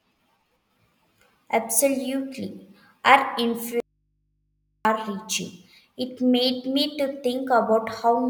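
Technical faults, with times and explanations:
3.80–4.85 s, audio dropout to a faint residue: the wanted signal was likely lost upstream while the path after the break stayed live, so the speech cuts off abruptly for about 1.05 s, leaving only mains hum roughly 50 dB below the speech.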